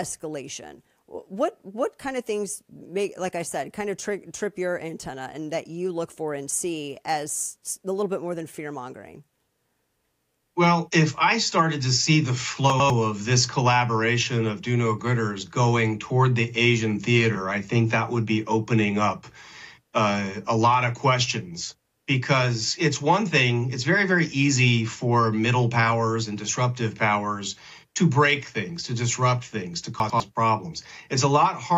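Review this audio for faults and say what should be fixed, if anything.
Chunks out of order occur at 12.7–12.9 s and again at 30.0–30.2 s: a 100 ms chunk plays one chunk late, swapping with its neighbour, so the sound jumps back and forth at the hard joins. Reorder buffered chunks by sequence number before writing.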